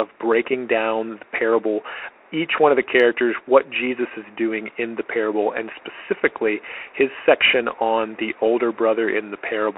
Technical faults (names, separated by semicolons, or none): Bluetooth CVSD headset codec